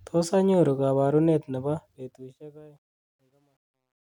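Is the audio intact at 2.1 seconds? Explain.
No. Truncation distortion on a fade runs from 1.61 to 4.03 s. The fade-out keeps too few bits, about 11, with no dither, so the quiet tail turns gritty and steppy, worst from 2.6 s.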